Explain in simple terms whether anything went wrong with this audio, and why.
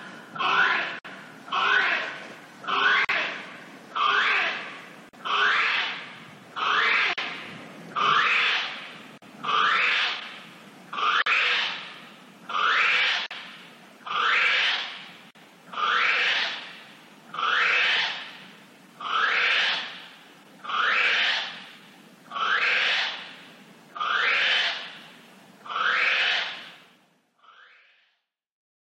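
Yes, something went wrong: there's a gap at a join of encoded pieces, eight times, at 0.99, 3.05, 5.09, 7.13, 9.18, 11.22, 13.26 and 15.31 s. The sound drops out briefly, about 57 ms the first time and 43 ms after that, then picks up right where it stopped. The audio was likely encoded in roughly two-second chunks and stitched together untrimmed, so each encoder's lead-in silence and end padding stayed in. The fade-out over the last couple of seconds is a deliberate, smooth edit.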